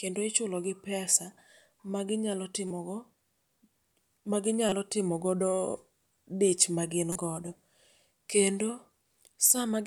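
Three short glitches show up as a corrupt frame decoded, where damaged compressed data got played anyway. Right after "ma ginyalo", from 2.68 to 2.71 s, a couple of frames misfire into a quick glitch. Around 4.69 to 4.77 s, a handful of frames give a louder glitch, peaking near about -15 dBFS. After "dich magin", at 7.12 to 7.16 s, a brief glitch appears. Each time, misread gains put energy at the wrong frequencies for about the length of each damaged frame.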